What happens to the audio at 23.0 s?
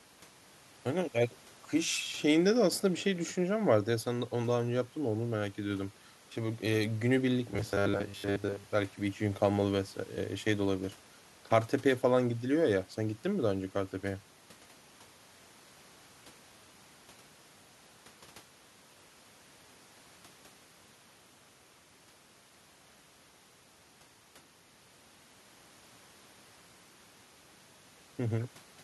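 At 23.0 s the speech carries on intact, with no dropout, glitch or other fault at that moment.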